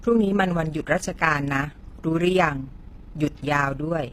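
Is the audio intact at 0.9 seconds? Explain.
No. At 0.9 seconds, as throughout the clip, overlap-add ripple is present: frames rejoined without constant-gain overlap make the level pulse by about 6 dB roughly 30 times a second, a fast flutter or rough tremolo. The treble also sounds gritty and lispy on s sounds, with misaligned upper harmonics, likely from HE-AAC compression rebuilding high frequencies by band replication, consistent with a low bitrate near 24 kbps.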